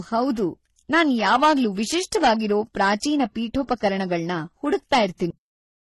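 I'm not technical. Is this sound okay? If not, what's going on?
No. Three separate problems can be heard.

Throughout, the speech has a few different kinds of digital roughness layered together, and nothing above 11.8 kHz, so the crisp top end is gone. That mix of flaws, rather than a single kind, likely comes from transcoding between lossy codecs: it was squeezed by one audio format, then re-squeezed by another (ending as MP3).

From 0.94 to 3.24 s the voice turns harshly fuzzy on every loud moment, and again, more mildly, from 3.71 to 3.88 s. This is hard clipping: the loudest parts were too big for the recording chain and got chopped flat. The fuzz follows the loudness of the speech, unlike the codec roughness, which is there all the time.

At 5.30 s the sound stops dead, mid-sound, straight into total silence with no fade or echo. That is a cut-off end: the final stretch of audio was simply never saved. 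A normal ending would let the last sound finish and trail away.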